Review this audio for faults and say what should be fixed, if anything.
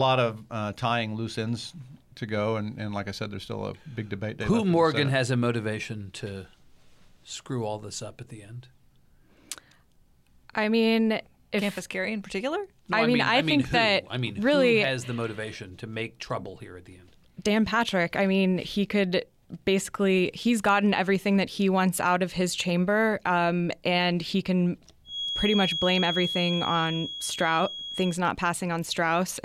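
A feedback whistle, most likely from the loop between loudspeaker and microphone sitting right at the edge of feedback, so a single frequency keeps circulating without running away. From 25.03 to 28.19 s, just after "um and he can", a thin, steady tone near 3.3 kHz sits a few decibels below the speech, swelling and fading slowly in level. To prevent it, lower the monitor gain or move the microphone out of the loudspeaker's path, and notch the offending frequency if needed.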